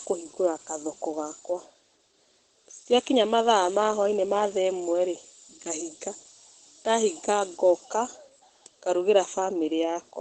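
A speech recording runs throughout with nothing above 9 kHz and a muffled, hoarse character. It is likely Opus compression in its speech (SILK) mode at a low rate, consistent with around 12 kbps at wideband. The band limit and a muffled, hoarse texture on the voice dominate.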